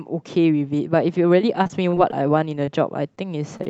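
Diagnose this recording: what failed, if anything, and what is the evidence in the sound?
The damage comes from the network and jitter-buffer stage of a call path. The audio carries the light coding texture of Opus, with the top end stopping near 8 kHz, which fits a wideband setting of about 64 kbps.

From 1.63 to 2.14 s there is repeated packet loss with a robotic sound. A string of short holes, the longest about 34 ms, is each filled by continuing the previous sound, so about a fifth of that stretch is synthetic and roughly 80 ms of real audio is gone. It sounds choppy. A single concealed loss gives one smear, but here the patches come back to back, and that repetition causes the mechanical quality.

Overlapping that stretch, from 1.98 to 2.40 s, comes a jitter buffer slow-down. The receiver repeated pitch periods to rebuild its reserve, adding about 42 ms, so the audio runs at about 91 % speed with unchanged pitch. 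Sounds are drawn out. Nothing is lost here, unlike in the packet-loss patches, and unlike a tape or clock fault the pitch does not drop.

There are three short concealed packet losses, at 2.65–2.69 s, 3.57–3.61 s and 3.63–3.67 s. Each is a hole of about 20 ms that was filled by extrapolating the last sound and then crossfaded back. Each one is heard as a brief smear or wobble, and a short consonant may vanish. Unlike a stall, the audio resumes further along, so real content is missing.

At 3.15–3.19 s there is a short stall from a late packet. The jitter buffer ran empty, and the last sound was stretched by about 18 ms until the packet arrived. The audio then continued from the same point, which added that much delay. A sound is held slightly too long with a slight buzz or dip. Unlike the concealed losses, nothing is skipped.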